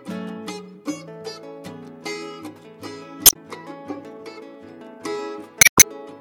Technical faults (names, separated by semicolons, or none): damaged data in a compressed stream